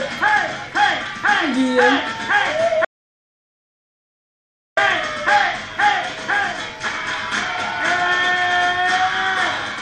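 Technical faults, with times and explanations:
2.85–4.77 s, playback stall: the player likely ran out of data, or its thread was blocked, so it produced nothing until it recovered about 1.92 s later. The sound stops abruptly in mid-flow and the output stays silent for that whole stretch, rather than fading or dropping in level, because no new audio reached the output during the gap. Sound then resumes at 4.77 s once the player catches up and output restarts.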